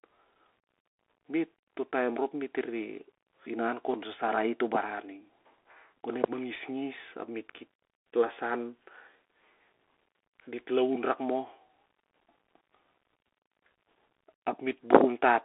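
Throughout, the speech carries plainly audible Bluetooth CVSD headset codec damage, confined to a 300 Hz to 3.4 kHz band. One up-or-down bit per sample with adaptive step size lags loud high sounds, so s sounds turn scratchy over a granular hiss, consistent with 64 kbps.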